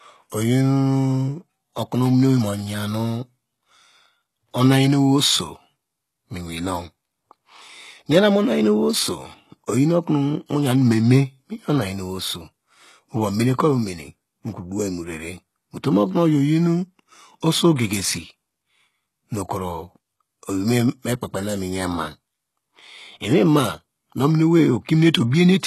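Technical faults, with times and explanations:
Throughout: HE-AAC compression. The speech has gritty, metallic sibilants, and nothing is present above 12.3 kHz. This is likely HE-AAC, at a rate that fits about 16 kbps. The treble is rebuilt from copied lower bands rather than coded, so its harmonics misalign with the real ones below.
17.76–17.79 s and 25.31–25.33 s: pre-echo. A short hiss of about 29 ms and then about 23 ms creeps in ahead of a sharp attack, softening its onset. The codec spreads its quantisation noise across the whole block, filling the quiet moment before the loud transient.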